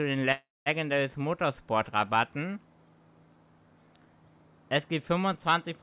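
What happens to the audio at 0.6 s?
At 0.6 s you hear the tail of a call audio freeze (0.32–0.69 s): the last sound smears into a fading buzz or hiss, then about 200 ms of silence, before resuming with nothing lost. Delayed packets likely emptied the jitter buffer.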